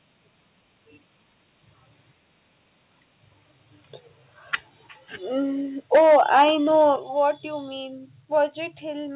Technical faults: microphone volume stepped down; microphone overload

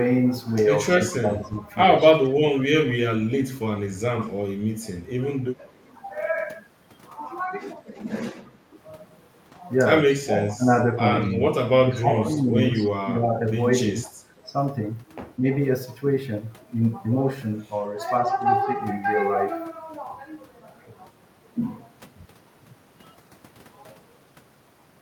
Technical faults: speech suppressed in double talk; echo leak

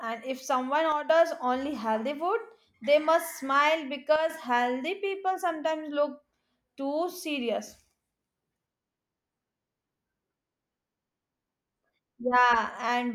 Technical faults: one channel drops out

